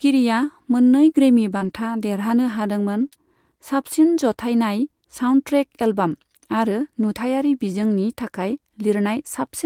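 The clip is speech, with two small clusters of network damage. Short concealed packet loss occurs at 1.57 to 1.63 s, then at 3.09 to 3.13 s and 3.13 to 3.17 s. Audio failed to arrive in time, so the decoder extended the preceding sound for about 35 ms, 21 ms and 15 ms. These fills are heard as brief smears or wobbles. A lost packet rebuilt from error correction overlaps the first loss, from 1.61 to 1.71 s, and recurs at 3.01 to 3.07 s. There is no gap in either. The following packets carried low-bitrate backup copies, and the decoder played those instead. The rebuilt stretches last 60 ms and 40 ms, and they sound rougher and noisier.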